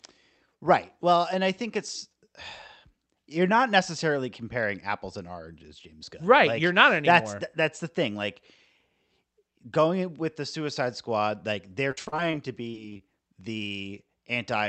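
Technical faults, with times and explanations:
11.91–12.35 s and 12.71–13.01 s, repeated packet loss (robotic sound): Right after "like they're", short dropouts recur. Each is patched by repeating sound, giving choppy, robotic speech.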